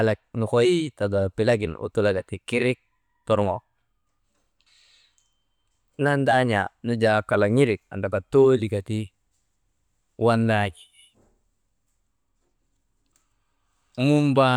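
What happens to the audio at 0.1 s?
Nothing goes wrong at 0.1 s; the speech there plays through cleanly, with no dropout, click or distortion.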